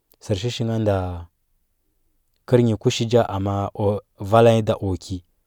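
No technical faults can be heard anywhere in the recording.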